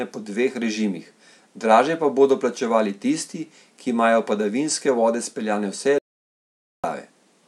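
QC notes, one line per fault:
5.98–6.84 s, audio dropout to silence: right after "padavinske vode speljane vse" the speech cuts off mid-flow into about 0.85 s of dead digital silence with no room tone, then resumes abruptly. Likely the input link or device dropped while the recorder kept writing silence, so that stretch is lost.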